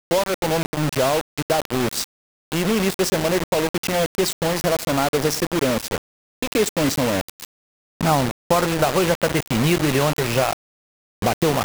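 Throughout the clip, a harsh, grainy distortion rides on the sound and changes with it, with error nearly as loud as the sound itself and quiet passages collapsing into sputter or silence. The likely cause is low bit depth without dither: about 3 bits, rounded.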